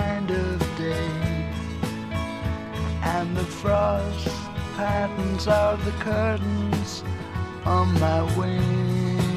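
No technical faults can be heard anywhere in this audio.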